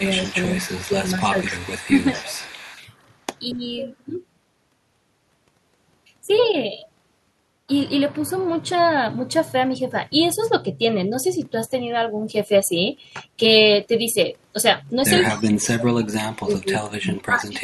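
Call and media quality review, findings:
Echo leak, 0.00–3.03 s, 3.51–3.82 s, 15.33–15.50 s: faint copy of the speech trailing by 230 ms, roughly 15 to 25 dB under the direct signal. Likely a far-end loudspeaker echo canceller leaving residue. Added delayed sound, not lost sound.

Speech suppressed in double talk, 0.69–1.36 s, 3.53–3.76 s, 15.29 s to clip end: talker level ducks during overlap, around 10 dB, then 15 dB, then a deep drop of about 35 dB lasting roughly 2 s. Likely the canceller attenuating both its own talker and the loudspeaker echo. Speech goes missing; no echo is added.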